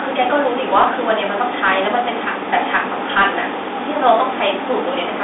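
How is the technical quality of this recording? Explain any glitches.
The recording has one fault, a Bluetooth CVSD headset codec degradation, present for the entire clip. The speech is confined to a narrow telephone band of roughly 300 Hz to 3.6 kHz, with nothing above 3.8 kHz. CVSD encodes one up-or-down bit per sample with an adaptive step, which fits a 64 kbit/s stream, and its coarse tracking leaves plainly audible granular distortion.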